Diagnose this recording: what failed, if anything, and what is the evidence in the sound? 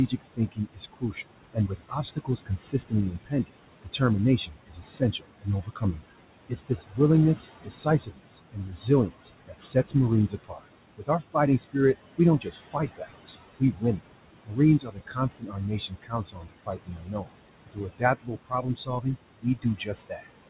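Noise suppressor artifacts, throughout the clip. This is a call-processing fault: the suppressor pulls down whatever bands it judges to be steady noise, by about 21 dB, frame by frame. The room noise, which sits about 12 dB under the speech, drops away in the gaps and swells back under each phrase. Because nothing reaches above 4 kHz, the path sounds like a narrowband call codec such as G.711.

Speech cut by the noise suppressor, from 0.08 to 6.99 s and again from 7.64 to 20.5 s. This comes from the same call-processing stage. The suppressor mistakes parts of the speech for noise and turns them down along with the background, by up to about 21 dB in the first stretch and about 22 dB in the second. Soft consonants and word endings sound swallowed or faint, adding up to roughly two seconds within the first span.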